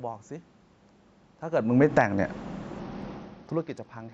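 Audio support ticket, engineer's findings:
Automatic gain falling, 1.71 to 2.12 s: level and background sink together by about 5 dB over roughly 0.4 s, AGC pulling gain after judging input too loud. Background dropping with the voice separates it from the talker movement near 1.5 s.

Automatic gain rising, 2.03 to 2.46 s: AGC judging input too quiet, lifting voice and room noise together by about 6 dB. The swell starts before the fall finishes, a pumping pattern in the gain stage, not the talker returning to the mic.

Bluetooth SBC bit pool drop, 2.80 s to end of clip: treble dulls and a gritty quantisation noise rises without recovering, which fits the bit pool falling from 28 to 9, about 78 kbps. Top lost inside the call path's normal 8 kHz limit, with added grit, so not a filter or a level change.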